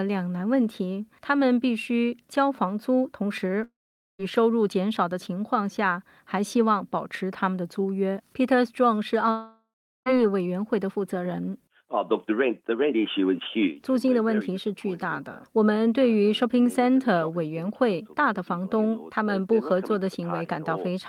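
At 3.63 to 4.21 s and again at 9.31 to 10.08 s the sound smears into a fading buzz, drops to silence for roughly 0.46 and 0.38 s, then resumes with a chunk gone, likely a long network dropout the receiver papered over.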